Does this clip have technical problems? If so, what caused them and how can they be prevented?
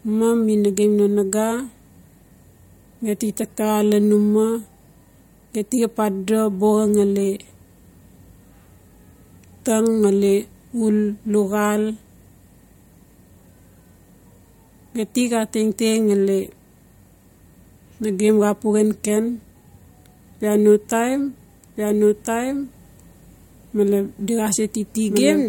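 Yes. From 21.77 s, just after "bia no taim", to the end, a doubled audio track appears: a full-band copy of the speech trails about 1.5 s behind at roughly 5 dB lower. Unlike echo, it has no decay or room colour and starts abruptly. The likely cause is a second, slower capture path or an edit that leaves two offset copies. Prevent it by routing each source only once and checking the mix for duplicate tracks.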